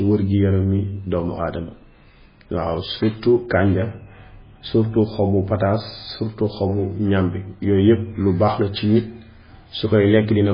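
The speech was most likely encoded as MP3 at a very low bitrate, which fits something around 16 kbps. Short of bits, the encoder cut the treble and dropped weak frequency lines, which flicker on and off between frames. From start to end nothing is heard above 5 kHz, and the sound is heavily damaged: watery and swirling, with metallic chirps on s sounds and smeared onsets.

From 3.27 to 6.10 s a de-emphasis was applied wrongly. A treble cut meant to undo pre-emphasis was applied to audio that had none, or was applied twice, tilting the response smoothly downward so that 10 kHz sits about 11 dB below 1 kHz. Across those seconds the speech turns dull and muffled, as if heard through cloth, and regains its brighter band-limited tone once the span ends.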